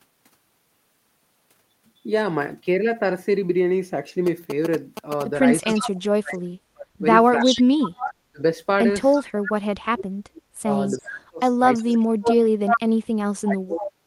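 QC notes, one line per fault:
4.27–5.23 s GSM signalling bursts. A nearby 2G phone is signalling, sending short groups of radio bursts that the audio circuit rectifies. They come through as a galloping dit-dit-dit of short buzzes at a 217 Hz rate. They are nearly as loud as the speech.
5.61 s to the end: speech suppressed in double talk. The talker's level keeps dipping and breaking up, at its deepest by about 40 dB. The likely cause is an echo canceller that could not tell the talker from loudspeaker echo while both sides spoke, so it turned both down.
5.7–5.9 s, 7.4–8.14 s, 9.14–9.24 s, 10.87–12.8 s and 13.82–13.87 s: echo leak. A copy of the voice returns 337 ms late. It ranges from faint to nearly speech level and is loudest in the longer stretches. It is likely loudspeaker pickup that the far end's echo canceller failed to remove.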